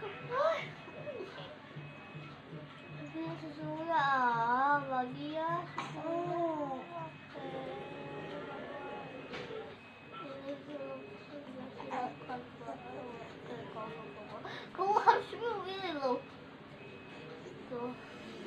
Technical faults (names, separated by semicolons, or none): none